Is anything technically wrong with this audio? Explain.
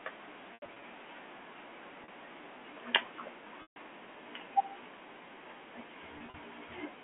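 Yes. Packet loss with pitch repetition occurs four times in this telephone-band speech, which passes only about 200 Hz to 3.4 kHz. The gaps are at 0.54–0.82 s (140 ms lost across 280 ms, longest run 80 ms), 2.04–2.08 s (40 ms), 3.62–3.76 s (140 ms continuous), and 6.18–6.34 s (80 ms across 160 ms, longest run 40 ms). To cover missing packets, the receiver repeats the last pitch period and fades it over about 50 ms. The 2.04 s gap sounds like a brief buzzy hold. The 3.62 s loss is long enough to decay into silence before a cross-fade back into speech.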